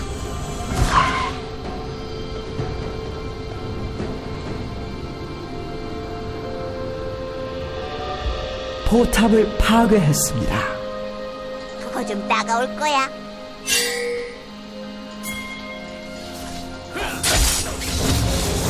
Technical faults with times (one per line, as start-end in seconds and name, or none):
none